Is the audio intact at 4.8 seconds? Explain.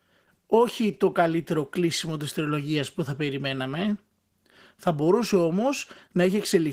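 No. At 4.8 seconds the speech carries Opus voice compression, present across the whole clip, and the damage is plainly audible. The sound points to a low bitrate near 16 kbps in hybrid mode: linear-prediction coding below 8 kHz with a coarse transform layer above, in 20 ms frames. The voice comes out hoarse and slightly robotic. A spectrogram would show blurred harmonics and patchy, smeared energy above 8 kHz.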